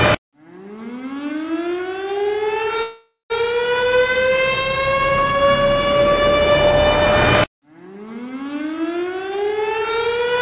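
At 2.82 s there's a call audio freeze lasting until 3.32 s. The last sound is stretched into a fading buzz or hiss that ends in about 160 ms of silence, likely because delayed packets drained the jitter buffer. Nothing is lost, but the audio resumes roughly half a second late.

From 9.04 to 10.32 s there's a jitter buffer speed-up. Small pitch-period slices are trimmed repeatedly, around 0.2 s in total, so the sound runs about 115% fast at unchanged pitch and feels rushed. Throughout, the band stops at 4 kHz, typical of a G.711 call path.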